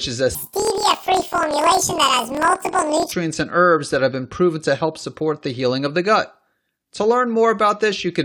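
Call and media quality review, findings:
Planar audio read as interleaved, 0.35 to 3.13 s, after "is a", before "and herbs that have". Speech jumps an octave higher with a buzz at 38.3 Hz. Likely a decoder or resampler layout mismatch. Each 26.12 ms block plays left then right at double speed.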